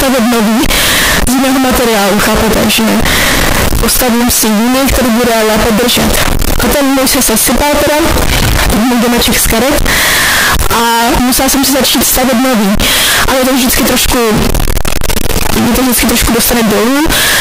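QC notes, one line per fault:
Throughout: float read as integer. Speech is loud and harsh, squared off at an almost fixed, high level, with background noise as loud as the speech and pitch still traceable. Likely cause: 32-bit float samples read as 32-bit integers, so sign and exponent bits set each value.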